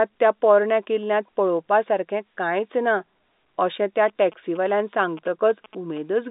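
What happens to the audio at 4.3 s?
At 4.3 s the speech is overlaid by GSM signalling bursts, running from 4.08 s, just after "अशें त्या", to 5.99 s. A nearby 2G phone is signalling, and the audio circuit rectifies its radio bursts into a galloping dit-dit-dit of short 217 Hz buzzes, around 20 dB below the speech. A spectrogram shows stacked harmonics of 217 Hz in clustered vertical stripes, cut off at the telephone band's 3.8 kHz limit, and the waveform shows grouped spiky pulses.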